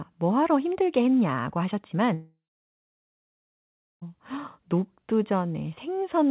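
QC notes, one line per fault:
2.14–4.03 s, long network dropout: after "뭐하러 힘들게 했냐고" the sound smears into a brief fading buzz, then about 1.6 s of near silence. About 1.9 s of audio likely never arrived. Playback resumes later, with that stretch gone.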